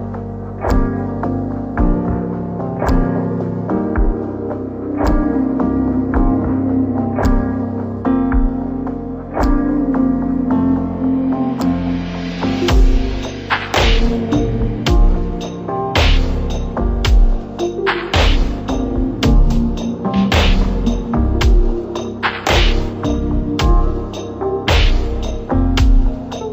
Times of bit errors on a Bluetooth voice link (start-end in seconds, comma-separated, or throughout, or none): none